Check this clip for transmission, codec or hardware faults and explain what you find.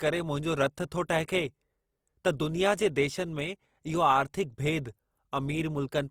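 One fault is present.

Throughout, the speech sounds rough and grainy, with noisy texture in place of clean tones. This is likely Opus compression, with starved bands filled by folded or noisy content. It fits a low rate near 24 kbps, though full bandwidth reaches 20.4 kHz.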